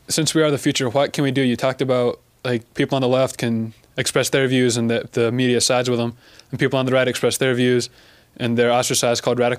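No technical faults are audible.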